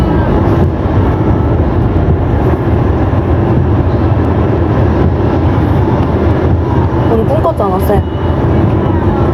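Sounds with gain pumping throughout. The gain ducks under each loud sound and swells back by about 10 dB, likely from overdriven input gain hitting a fast limiter.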